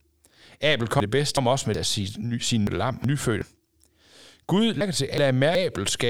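Speech with three stretches of frames out of order, at 1.00 to 1.75 s, 2.67 to 3.42 s and 4.81 to 5.55 s. The first ends just before "af sin sin" and the second begins just after it. In each, two neighbouring runs of about 0.37 s play in swapped order, which fits four frames per run. The stretch sounds like a garbled flutter. No time is lost.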